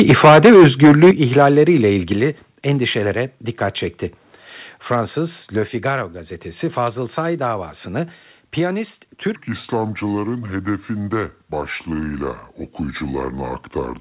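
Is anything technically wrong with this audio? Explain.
Yes, there are three kinds of fault in this speech, heard through a call path whose G.711 A-law coding leaves nothing above 4 kHz.

Microphone overload runs from 0.00 to 1.11 s, about 11 dB over, with roughly a fifth of samples flattened, and again at 1.37–1.61 s, about 3 dB over. The likely cause is input volume set too high for the converter. Loud syllables crackle harshly, and the waveform shows squared-off tops.

Microphone volume stepped down five times: at 0.11 s (about 2 dB), 1.11 s (about 9 dB), 2.13 s (about 5 dB), 3.15 s just before "dikkat çekti" (about 2 dB), and 5.64 s (about 2 dB). This is likely automatic gain control reacting to overload. Level drops abruptly, seen as sudden steps in the waveform envelope.

A section at the wrong speed runs from 9.36 s to the end, playing at 0.708 times speed, roughly seven semitones lower. 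This is likely caused by a clock mismatch during playback or editing. Speech turns deep and sluggish, and on a spectrogram the harmonics compress downward.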